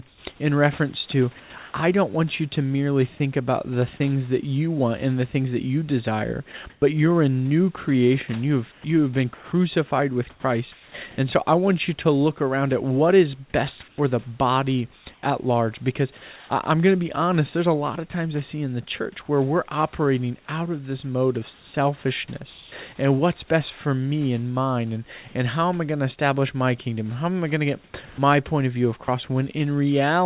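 Speech, carried over a narrowband call path with nothing above 4 kHz, in which the room background is replaced by comfort noise in four places: 0.08 to 1.74 s, 13.88 to 16.5 s, 21.54 to 22.72 s and 27.84 to 28.18 s. In each, the real room noise, about 33 dB below the speech, gives way to a smoother synthetic noise. This is likely discontinuous transmission, with the receiver synthesising noise while the sender stays silent. Two onsets are clipped by the voice detector, each losing about 20 ms: at 1.72 s, before "I don't want you", and at 28.16 s, after "I going to get" and before "point of view". The speech starts abruptly without its soft attack, likely because the detector reacted late and comfort noise covered the opening. From 6.52 to 10.94 s the sound is chopped by the voice detector. Quiet stretches totalling about 0.8 s drop out, likely because the detector toggled transmission on and off repeatedly.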